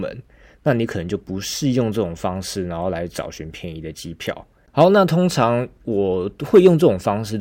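Hard clipping occurs at 4.80 to 4.84 s and again at 6.55 to 6.87 s. The speech is driven about 1 dB past what a stage can pass, so its peaks are cut flat. The flattened tops add high harmonics, heard as crackle on peaks.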